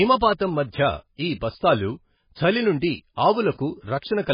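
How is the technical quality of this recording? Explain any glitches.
Poor: the speech is heavily degraded throughout. MP3 compression is the likely cause. Nothing sounds above 5 kHz, a hard ceiling on a spectrogram, and the sound turns watery and swirly, which fits roughly 16 kbps.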